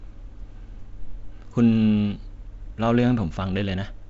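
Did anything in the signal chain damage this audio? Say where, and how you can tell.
No, nothing in the chain damaged this speech; the empty band above about 7.7 kHz is simply the expected ceiling of G.722 wideband telephone coding, and its light coding hiss is normal for that codec.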